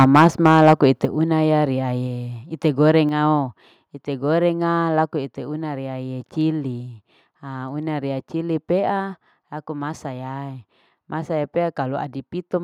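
From 0.0 to 0.73 s the loudest peaks crackle harshly, likely microphone overload: input about 5 dB too hot, flattening peak tops rather than blurring the whole signal. Microphone volume stepped down at 0.04 s (about 2 dB), 1.05 s (about 6 dB) and 3.09 s (about 4 dB), likely the call software cutting input gain. Each is an instant single-step drop, with background falling too, not a gradual fade.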